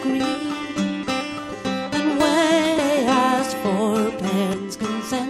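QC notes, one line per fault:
2.78 s and 4.53 s, audio missing between chunks: at each point roughly a third of a second of sound drops out and the two sides butt straight together with no silence, so the audio jumps forward abruptly. This is likely from processing in 2-second chunks that loses material at each handover. On a waveform there is a hard splice with a sudden shape change; on a spectrogram, a sharp vertical seam where the patterns fail to continue.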